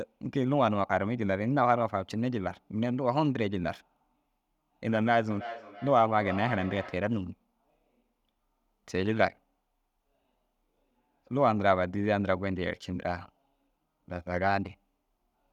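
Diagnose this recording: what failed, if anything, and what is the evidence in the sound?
Call processing let a feedback echo between two devices through from 5.31 to 7.13 s. The speech returns roughly every 300 ms, peaking about 12 dB below the direct sound, because a second device in the room replays it into a microphone whose canceller can't touch another device's output.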